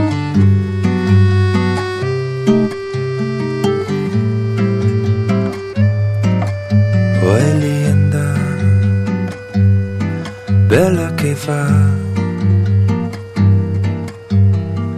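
From 0.85 s to 1.25 s there is hard clipping: the signal runs about 2 dB past what a stage in the chain could pass, so the tallest peaks are sliced flat. At this mild overdrive it comes through as a brief crackle riding on the loudest moments. On a waveform the peaks sit squared off against a fixed ceiling, and a spectrogram shows vertical smears of added harmonics reaching high up the spectrum at each clipped peak.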